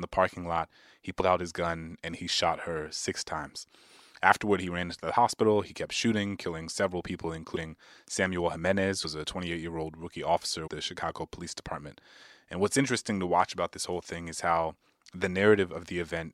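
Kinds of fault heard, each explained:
Compressed frames skipped: whole blocks of the encoded stream never reach the output, so the speech leaps forward in frame-sized steps. About 0.1 s of sound is lost at 1.19 and 7.55 s, and about 0.2 s at 9.03 and 10.66 s, jumps that fit a frame of roughly 23 ms. A waveform shows an abrupt envelope change, and a spectrogram shows a brief vertical smudge where patterns break off.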